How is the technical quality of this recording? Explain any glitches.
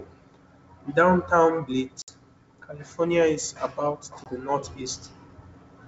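Two dropouts from packet loss on an ADPCM call break up the audio, which runs over G.722 wideband coding at 64 kbit/s. At 2.02 to 2.09 s, a few packets vanish and about 60 ms is lost. At 4.24 to 4.34 s, just after "is about to", roughly one packet drops. Each gap is hard-edged silence. The decoder's predictor and step size fall out of step with the sender's. So speech returns slightly distorted, then settles.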